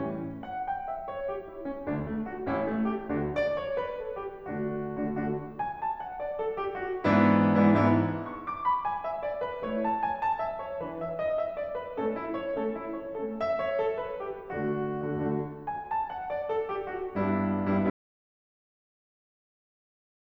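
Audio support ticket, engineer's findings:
Input path lost at 17.90 s, likely a disconnected source or failed link, with the recorder still writing silence. Audio dropout to silence: the music cuts off mid-flow into silence with no room tone, running to the end at 20.20 s. The last 2.3 s of material is gone.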